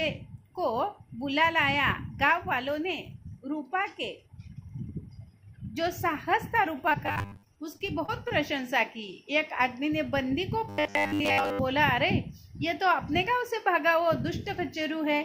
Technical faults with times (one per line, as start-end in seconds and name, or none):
6.89-8.32 repeated packet loss (robotic sound)
7.06-7.43 robotic sound from repeated short buffers
10.69-11.60 robotic sound from repeated short buffers